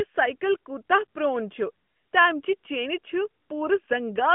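No technical faults can be heard anywhere in the speech. It comes over an AMR narrowband mobile codec link at 12.2 kbps, so the sound is confined to roughly 150 Hz to 3.4 kHz, with only light coding texture.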